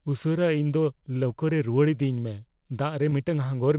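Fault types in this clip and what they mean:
Short concealed packet loss: at 3.10 to 3.14 s, about 20 ms of the call arrived too late for the decoder, and the receiver covered the hole by extending the preceding sound, repeating its pitch where voiced or substituting shaped noise where not, before crossfading back into real audio. It comes through as a brief smear or wobble in the speech, set against the narrowband sound of a G.711 mu-law call path with nothing above 4 kHz.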